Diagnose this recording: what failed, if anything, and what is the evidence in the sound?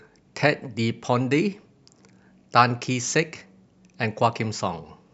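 No failure is audible; nothing in the sound points to one.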